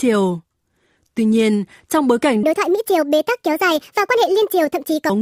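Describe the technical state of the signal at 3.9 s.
Wrong sample rate is in effect at 3.9 s, inside a stretch running from 2.43 s to 5.10 s, right after "nhiên trong bối cảnh". The samples are being played back faster than they were captured, with no rate conversion, so the speech runs 1.5 times too fast and sits about 7 semitones higher. That ratio fits audio recorded at 32 kHz being played at 48 kHz, and it makes the voice sound high and hurried throughout.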